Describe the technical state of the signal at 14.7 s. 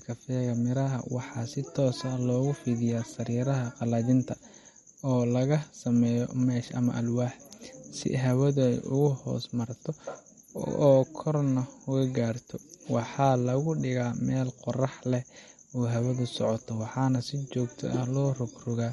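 At 14.7 s the speech carries MP3 compression artefacts, present across the whole clip rather than at that moment alone. Nothing sounds above 11.8 kHz, and the upper range has a watery, swirling quality as weak frequency lines switch on and off between frames, with metallic chirps on s sounds. The likely cause is an encoder starved of bits, which fits a low bitrate near 48 kbps. A plain low-pass filter would dull the top without that shimmering instability.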